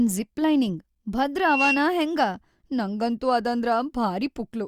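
A speech clip hit by loudspeaker feedback squeal from 1.37 to 1.88 s: a 2.7 kHz tone swells over about a third of a second to roughly 5 dB above the speech, as the mic-to-speaker loop rings. A spectrogram shows one bright horizontal line; the waveform envelope bulges.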